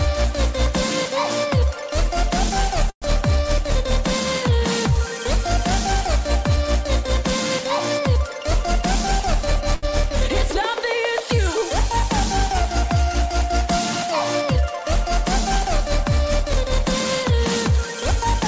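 The audio, carried over a call link whose band stops at 8 kHz as G.722 does, has two interruptions. From 2.90 to 3.04 s there is a call audio freeze. The last sound carries on as a fading buzz or hiss and then drops to silence for about 70 ms, inserting roughly 118 ms of filler. This is likely the jitter buffer running dry while packets were held up in transit. When they arrive, playback resumes exactly where it stopped, so nothing is lost, only delayed. From 9.75 to 9.85 s there is a short stall from a late packet: a single sound is stretched for 80 ms with a slight buzz or dip until the overdue packet arrives, then the audio continues without loss. What separates the two is the silence. The freeze fades right out, while the stall never goes quiet and only holds the sound too long.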